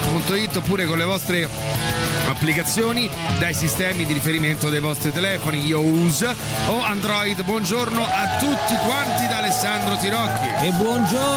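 Gain pumping runs throughout, the background swelling in gaps and ducking around 10 dB under loud sounds, likely from an overdriven limiter; the waveform looks flattened, with a rising noise floor between peaks.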